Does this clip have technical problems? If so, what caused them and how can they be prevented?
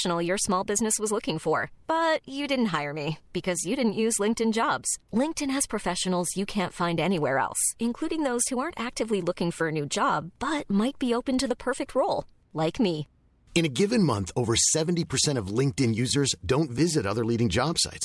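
No, the speech in this clip comes through with no audible technical faults, so there is nothing to trace to a cause or to prevent.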